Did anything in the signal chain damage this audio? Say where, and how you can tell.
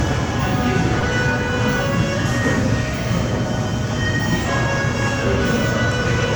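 Yes, at the network stage. A short stall from a late packet at 0.99 to 1.05 s holds the sound about 33 ms. Nothing is lost; everything after runs 33 ms late.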